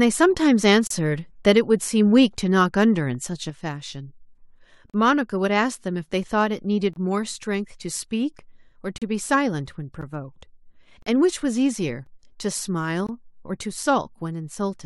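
At 0.87 to 0.91 s the first gap between stream segments appears. The time stamps of two adjacent 1 s segments fail to meet, and the player fills the missing stretch with digital silence. The speech stops dead for about 33 ms, with hard edges on both sides. Nothing is cut from the speech itself; the silence is inserted, so everything after it arrives slightly later.

At 3.50 s a sudden gain jump, likely a digital gain change applied from one sample to the next without a ramp, drops the level by about 5 dB and holds it there to the end. The speech and the background noise fall together in a single step, so the room sound thins at the same instant as the speech.

The gaps between stream segments continue at 4.90 to 4.94 s, 6.93 to 6.96 s, 8.98 to 9.02 s, 10.01 s, 11.02 to 11.06 s, 12.06 s and 13.07 to 13.09 s. They fall on segment boundaries one or two seconds apart and last from about 4 ms to 40 ms. 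Each is a hard-edged hole of silence in the speech.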